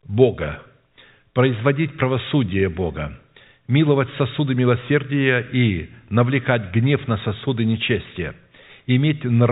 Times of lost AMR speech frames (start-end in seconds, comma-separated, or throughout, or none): none